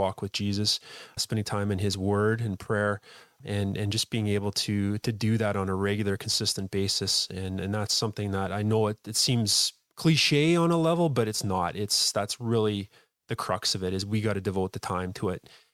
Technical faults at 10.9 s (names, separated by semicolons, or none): none